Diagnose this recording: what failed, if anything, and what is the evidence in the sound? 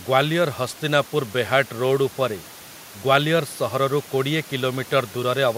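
Nothing failed in this recording; the only thing under the speech is the room's own background noise, sitting about 24 dB below it.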